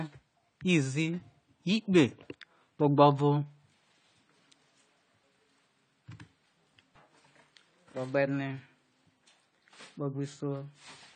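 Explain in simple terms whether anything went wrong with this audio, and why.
Yes: from start to finish the speech sounds dull and has audible codec damage, with nothing above 9 kHz. This is likely AAC compression. A plain treble cut would only sound muffled, while this also carries the added damage of heavy data reduction.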